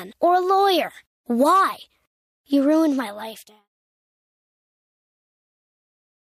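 Speech recording; no technical faults are audible.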